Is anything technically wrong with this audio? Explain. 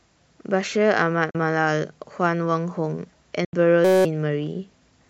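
Yes. At 1.30 s and 3.45 s the speech cuts to silence for about 40 ms and 80 ms. These are likely Bluetooth dropouts, where packets arrive late and are discarded. They show as abrupt blank gaps in the waveform.

From 3.85 to 4.05 s a system hang loop repeats a 5.33 ms slice, which fits a 256-sample buffer, 38 times, replacing about 200 ms. It sounds like a steady 188 Hz buzz and shows as evenly spaced harmonic lines on a spectrogram.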